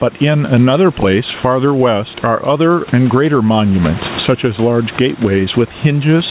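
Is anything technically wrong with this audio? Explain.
Yes. Gain pumping runs throughout the speech, likely from input gain set far too high, with a fast limiter clamping each loud passage. The background, about 28 dB below the speech, swells in pauses and ducks by about 15 dB under loud moments, squashing the dynamics.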